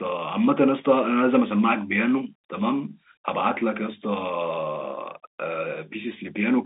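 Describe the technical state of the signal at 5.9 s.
At 5.9 s the speech is intact, carried by ordinary G.711 telephone coding that passes only about 200 Hz to 3.6 kHz.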